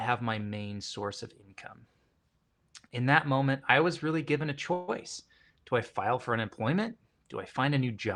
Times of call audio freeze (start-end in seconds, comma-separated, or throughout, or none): 4.73-4.90